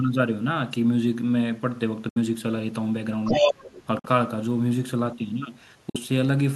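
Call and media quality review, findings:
Bluetooth dropout, likely. Wireless link failing to deliver audio packets to the headphones in time; late packets discarded, output muted until valid ones arrive. Heard as silent holes: 2.09 to 2.17 s (about 70 ms lost), 3.99 to 4.06 s (about 46 ms), 5.90 to 5.96 s (about 46 ms). Gap lengths fit two or three lost packets each. Sound resumes further along, as if playback had continued through the gap.

Other side's voice leaking through, 3.25 to 3.83 s. Far-end audio from the talker's loudspeaker reaching the microphone; echo canceller likely leaving a large residual uncancelled. Result: a second voice audible under and over the talker, roughly 5 dB louder than the local speech, lasting just over half a second.

Speech suppressed in double talk, 3.37 to 3.62 s. Both ends active at once; echo canceller likely unable to tell local speech from far-end echo, so attenuating both. 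Talker's voice dips by up to about 15 dB, roughly 300 ms affected in total, overlapping the leak above.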